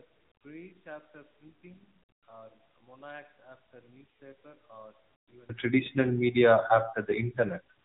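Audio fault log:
throughout: AMR narrowband mobile codec. The speech was coded at 8 kHz sampling, so nothing above 4 kHz survives, and the voice is rebuilt from a vocal-tract model fed by a handful of pulses per 5 ms subframe. The low bit budget, which fits a rate near 7.4 kbps, leaves plainly audible damage: a muffled, band-limited voice with a buzzy, synthetic edge, and any background turned into a swirling warble rather than natural noise.
0.0–5.49 s: one channel inverted. One stereo channel likely had its polarity reversed, so when the two channels are summed to mono, the material they share cancels instead of adding. The centred voice drops by about 30 dB, leaving only the small difference between the channels: a faint copy of the speech. At 5.49 s the cancellation stops and the voice returns at full body and level.
5.32–5.37 s: AMR bit errors. Over a weak link, a few percent of the less protected bits in the coded frames arrived flipped while the checksum on the critical bits still passed, so the decoder accepted them. 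The damage spans roughly two 20 ms frames. The excitation pulses landed in the wrong places and the fine pitch, gain and spectral values were off, so for that moment the voice keeps roughly its pitch and level but turns hoarse, scratchy and gargly.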